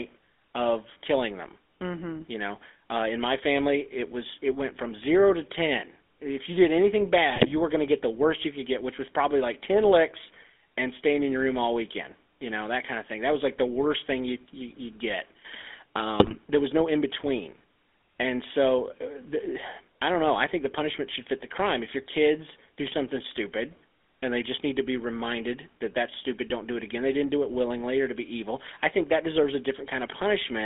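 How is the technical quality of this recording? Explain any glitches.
Technical quality is pretty rough: the whole clip has been through a phone-grade codec, and the call is hit by bit errors twice.

Throughout, you're hearing the GSM full-rate codec. The band runs only from about 250 Hz to 3.5 kHz, so there's no air at the top and little body at the bottom. The codec models the vocal tract and feeds it a sparse train of regularly spaced pulses, so the excitation is a thinned-out guess at the real one. That's the plainly audible buzzy, gravelly roughness, consistent with a 13 kbps full-rate stream.

Then there are GSM bit errors at 7.29 to 7.53 s, right after "you did anything" and before "you were going to", and again at 16.2 to 16.35 s, just before "there was no in". On a weak link, corrupted bits reach the decoder, and bad filter, pitch or gain parameters skew the spectrum or spike the level frame after frame, over 12 frames in the first burst and 7 in the second. 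You get brief squawks, pops and gargling, with the first burst a little longer.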